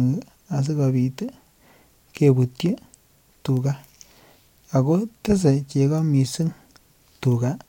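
At 3.57 s and again at 7.35 s, a bit error spike breaks into the speech. A flipped bit throws two samples far off by a power of two before snapping back. Each is heard as one sharp, broadband tick unrelated to the sound.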